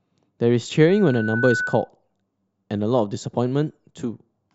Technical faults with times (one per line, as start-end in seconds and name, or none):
0.89-1.89 loudspeaker feedback squeal